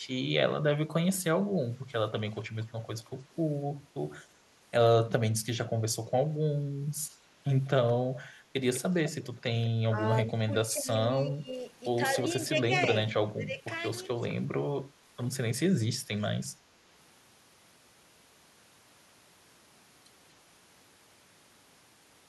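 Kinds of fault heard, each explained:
echo leak: A faint copy of the speech returns about 200 ms late, twice. Likely a loudspeaker's echo canceller let its pickup through.
speech suppressed in double talk: The speech dips sharply, by up to about 25 dB, in short bursts. The echo canceller likely turned it down while both sides talked.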